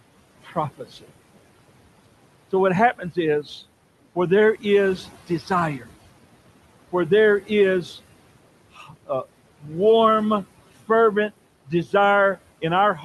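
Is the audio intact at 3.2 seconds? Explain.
No. Between 2.98 and 3.48 s there is speech cut by the noise suppressor: the suppressor mistook part of the speech for background noise and pulled those bands down with it, by about 12 dB at the deepest. Only about a tenth of a second within that half-second span is affected, but there the softer sounds come across swallowed and faint, as if briefly dipped out of the foreground rather than cleanly spoken.

Noise suppressor artifacts also run through this moment, as they do across the whole clip. The suppressor lowers whatever it judges to be steady noise, here by about 18 dB, frame by frame, so the residue of the room noise, which sits about 19 dB below the speech, rises and sinks around the speech. The top end stops near 12 kHz, which fits an Opus call codec at a moderate bitrate.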